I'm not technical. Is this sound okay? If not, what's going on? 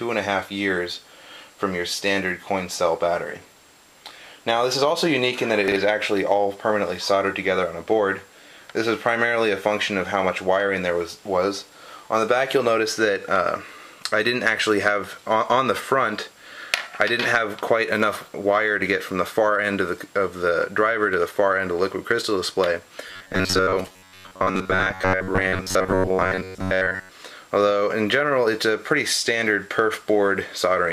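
No. At 5.68 to 5.76 s there's a quick jumbled blip. That's chunks out of order: a 40 ms slice of audio arrived one slot late and played after the piece meant to follow it. Nothing's missing, just shuffled.

From 23.09 to 27.11 s the sound turns into a stiff, metallic buzz at about 94 Hz. That's robotic sound from repeated short buffers, likely caused by audio arriving too slowly, so the software kept replaying a tiny 11 ms scrap and skipped most of the real sound.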